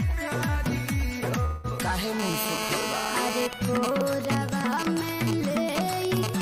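From 1.45 to 1.67 s the sound smears into a fading, buzzy continuation of its last moment for about 180 ms, never reaching silence, then resumes further on with that stretch gone. This is likely a long network dropout, concealed by the receiver rather than heard as a click.

From 2.19 to 3.47 s a hard, raspy GSM phone buzz at 217 Hz sits about 4 dB below the signal, rich in harmonics and nearly steady. A nearby 2G phone in a call transmits in bursts 217 times a second, and the audio circuitry rectifies those bursts. Unlike mains hum, it is harsh and its pitch is unrelated to 50 or 60 Hz.

From 3.53 s to the end come GSM signalling bursts, only slightly quieter than the signal. They are even ticks with a longer 217 Hz buzz twice a second. The phone is still in a call, but its user is silent, so only sparse burst groups are sent. That broken rhythm separates them from the continuous buzz before.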